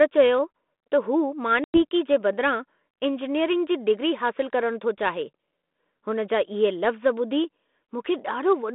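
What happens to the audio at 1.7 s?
Packet loss on an ADPCM call runs from 1.64 to 1.82 s. About 100 ms of audio, roughly a handful of packets, drops to hard-edged silence. Unlike a plain dropout, the speech comes back briefly distorted while the G.726 decoder's predictor and step size resynchronise.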